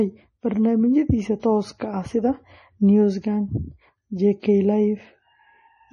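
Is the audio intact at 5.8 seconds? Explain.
No. At 5.8 seconds the speech carries MP3 compression damage, which runs through the whole clip rather than starting there. The sound has nothing above 11 kHz and a heavy watery, swirling texture, most likely from MP3 encoding at a very low bitrate, around 32 kbps. Short of bits, the encoder cut off the treble at a fixed point and dropped weak frequency lines that flicker on and off between frames, leaving s sounds chirpy and attacks smeared.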